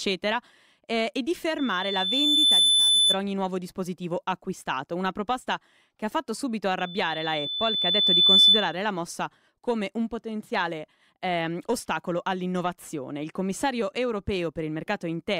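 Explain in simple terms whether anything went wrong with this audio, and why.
Something did go wrong: there are two bursts of loudspeaker feedback squeal. A microphone picked up the speaker it was feeding, and one pitch, a shrill tone around 3.5 kHz, kept looping and growing. The first runs from 1.58 to 3.19 s, right after "eh e di", swelling over about a second. The second, louder one runs from 6.79 to 8.76 s, after "che ha fatto subito", building for roughly a second and a half.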